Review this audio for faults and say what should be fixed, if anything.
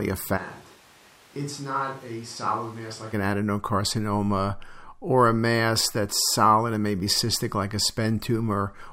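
Switch to a distant microphone, 0.39 to 3.12 s: speech abruptly turns roomy, thin and roughly 10 dB quieter, likely because the close mic dropped out, returning just before "an adenocarcinoma or a". Monitor the close microphone feed live and check its cable, transmitter and battery before recording.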